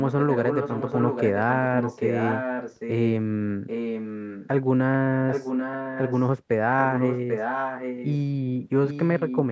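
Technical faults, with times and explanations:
0.07–1.54 s, 1.74–3.12 s, 3.67–4.48 s, 5.29–6.26 s, 6.84–8.15 s and 8.87 s to the end: echo leak. A delayed copy of the speech trails the original by about 0.79 s. It sits only about 5 dB below the speech, falling to about 10 dB below in the last stretch. The likely cause is a far-end loudspeaker whose echo canceller let its microphone pickup through, so the sound was sent back.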